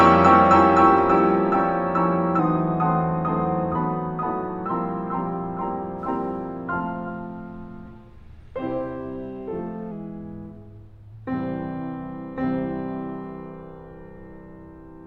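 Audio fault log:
2.39 to 4.66 s, drift correction step: the music suddenly plays about 5.7% slow and drops 101 cents, roughly a semitone flat, then snaps back. Speed and pitch move together. The likely cause is clock-matching software changing the playback rate in one step to rebalance its buffer.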